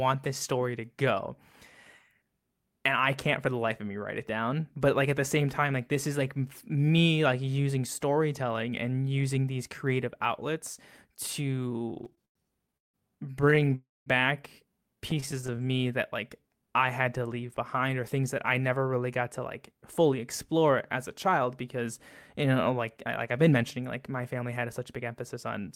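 From 11.63 to 13.74 s the speech breaks into repeated stalls (stutter). Packets kept arriving late, so the jitter buffer emptied about twenty times, and each gap was bridged by continuing the last sound, the longest for about 166 ms, together making up about 23% of that stretch. It drags and hiccups without losing content. A spectrogram shows short smeared, repeated patches breaking the harmonic traces. The same fault returns from 15.11 to 15.92 s with sixteen shorter gaps, none above 23 ms, also about 23% filled, giving a finer, rapid flutter.

At 13.75 s, right after the first stutter, comes a call audio freeze lasting until 14.09 s. The last sound carries on and fades, then roughly 190 ms of silence, before speech resumes where it stopped. The likely cause is packets held up in transit until the jitter buffer ran dry, inserting about 309 ms of delay. On a waveform this reads as a decaying tail ending in a flat line, and on a spectrogram as frozen, blurred bands fading to blank.

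From 16.42 to 17.46 s a jitter buffer slow-down stretches the audio to about 90% speed. To rebuild its reserve, the receiver repeated single pitch periods many times, adding about 107 ms. The pitch stays the same while sounds are drawn out. A spectrogram shows harmonics held level but elongated, and the waveform shows runs of near-identical cycles.

From 19.20 s to 25.67 s a jitter buffer speed-up runs the speech at about 105%. The buffer held more audio than its target, so the receiver trimmed short pieces of one or a few pitch periods again and again, cutting around 0.4 s in total. Pitch is unchanged, but delivery sounds slightly hurried. On a spectrogram the syllables look compressed in time, and the waveform shows cycles missing at small seams.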